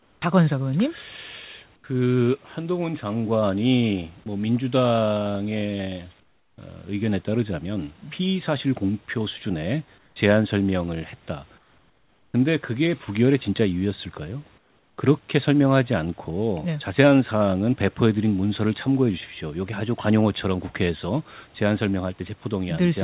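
Speech, carried over a narrowband call path with nothing above 4 kHz. Comfort noise in place of the background appears at 0–0.22, 1.76–1.84, 6.2–6.58, 9.98–10.16, 11.58–12.34 and 14.58–14.98 s. The real room noise turns flat and featureless, about 3 to 10 dB quieter. Discontinuous transmission is the likely cause. At 4.24 s, sound dropped by the voice detector briefly gives way to steady noise, likely from the sound being judged as background.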